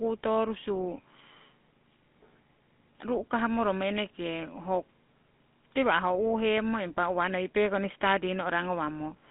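A buzzy, gravelly roughness runs through the whole of this speech recording, with a thin telephone-like band of roughly 200 Hz to 3.6 kHz and nothing at all above 3.8 kHz. The damage is plainly audible from start to finish. It is the sound of the GSM full-rate codec, which models the vocal tract and rebuilds the excitation from sparse, regularly spaced pulses, a texture that fits the original 13 kbps full-rate scheme.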